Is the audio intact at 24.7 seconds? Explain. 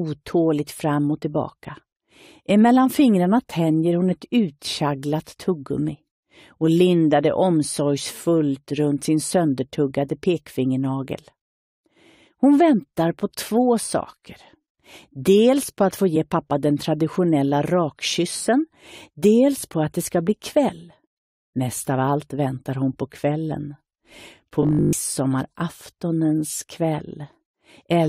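No. From 24.63 to 24.95 s, new audio likely arrived too seldom, so a roughly 20 ms stretch was replayed over and over, with most of the real audio skipped. This produces robotic sound from repeated short buffers: a rigid, metallic 50 Hz buzz.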